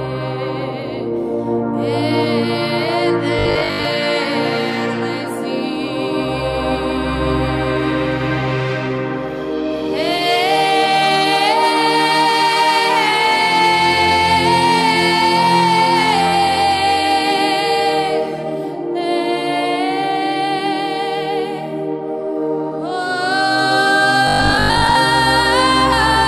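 From the start until 18.4 s, a rough, metallic edge clings to the sound: periodic clock jitter, with the converter clock wobbling at around 100 Hz and spreading sidebands around every component. At 3.39 to 3.85 s and again at 24.28 to 24.96 s, the sound turns into a rigid 50 Hz buzz, likely from robotic repetition of short 20 ms buffers replacing roughly half, then most, of the audio.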